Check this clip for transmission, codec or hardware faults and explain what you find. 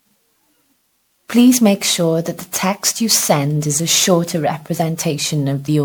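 One codec fault runs through the whole speech clip. Generation loss: swirly, hollow and smeared, with blurred attacks and no content above 20.8 kHz, likely from about seven passes of MP3 re-encoding at around 128 kbit/s, with artefacts piling up.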